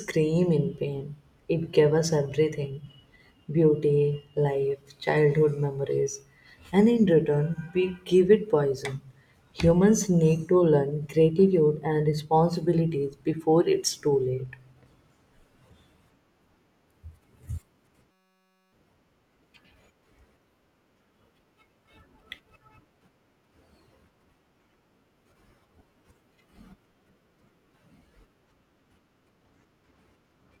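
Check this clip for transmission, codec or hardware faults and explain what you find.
One hardware fault stands out: a system hang loop from 18.11 to 18.73 s. For about 0.6 s the speech freezes into a steady buzz at 188 Hz. The audio driver stalled while the sound hardware kept replaying the same tiny ring buffer, a 5.33 ms slice that fits a 256-sample buffer, over a hundred times. Roughly 0.7 s of speech never arrives. The waveform shows one identical short cycle tiled edge to edge. The spectrogram shows a flat, unchanging comb of harmonics spaced 188 Hz apart.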